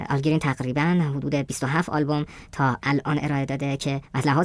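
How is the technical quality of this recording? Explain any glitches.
The recording's marred by one problem that runs the whole way through: it's playing back at the wrong sample rate. The speech comes out high and hurried, about 1.38 times too fast and pitched up about 5.5 semitones, a bit more than a perfect fourth. Speed and pitch move together like that when the samples are clocked out faster than they were captured with no conversion. The ratio fits audio recorded at 16 kHz being played at 22 kHz.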